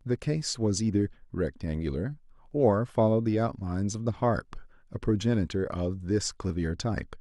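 Speech, where neighbouring stream segments overlap in their time stamps. The player discards genuine audio, leaving tiny skips at 2.51 s and 6.50 s, about 4 s apart, which fits 4-second segments.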